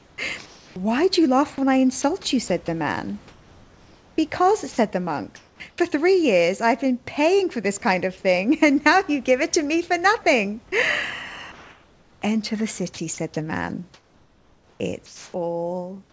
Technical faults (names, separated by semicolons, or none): sound chopped by the voice detector; sound dropped by the voice detector